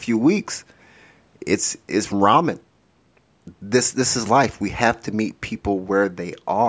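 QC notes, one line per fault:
No faults to note.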